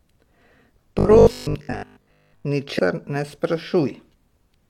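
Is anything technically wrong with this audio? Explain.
Yes. From 0.99 to 2.45 s the speech turns into robotic sound from repeated short buffers. It becomes a rigid, metallic buzz at 50 Hz that still loosely tracks the speech. The likely cause is audio arriving too slowly, so a 20 ms chunk is replayed over and over while most of the real audio is lost.

Compressed frames are skipped at 2.74 to 2.79 s and again at 4.09 to 4.14 s. Each time the speech jumps ahead. The first jump skips about 300 ms and the second about 200 ms. That fits several 46.4 ms frames going unplayed.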